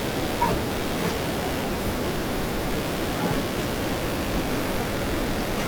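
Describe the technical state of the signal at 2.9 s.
At 2.9 s there's computer activity noise running under the speech, same as across the whole clip. Processor or graphics load is shifting the shared ground, so you get a buzzy chirping pulse at around 70 a second, sitting roughly 15 dB below the speech.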